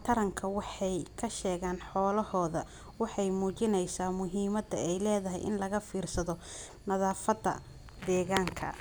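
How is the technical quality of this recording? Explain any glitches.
The speech recording has one glitch near the end. CD scratch ticks run from 7.11 to 8.17 s: eight ticks, roughly seven a second, as a blemish on the disc defeats error correction once per rotation and the player patches over the lost samples, leaving brief clicks or gaps of a few milliseconds.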